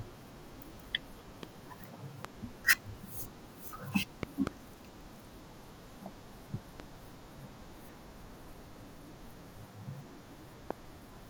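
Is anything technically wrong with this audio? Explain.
Yes. Loud pops occur at 1.43–1.45, 2.25–2.27, 4.23–4.49 (a double pop), 6.80–6.82 and 10.71–10.73 s. These are most likely voltage spikes from a switch or static. Each sounds like a sharp thump well above the speech and appears as a tall vertical spike on the waveform and a full-height stripe on the spectrogram.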